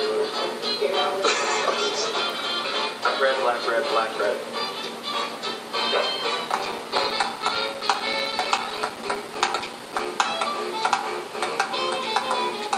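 Periodic USB or driver dropouts run from 6.53 to 10.06 s. Every 64 ms, something stalls the audio path and a few milliseconds of signal drop to silence. About fifty gaps in all produce a steady, rapid ticking over the sound.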